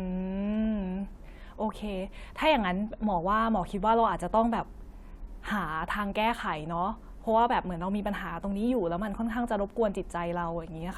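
No audible faults occur anywhere in this recording.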